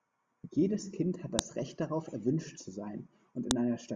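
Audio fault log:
1.39 s and 3.51 s, file header played as audio: a sharp, loud click snaps out at each point in the speech. Each is very brief, only a couple of milliseconds. Separate WAV pieces were joined here without their headers being stripped. The few dozen bytes of header data were read as sample values. Those values bear no relation to the waveform around them, so they form a sudden spike. That spike is heard as the snap.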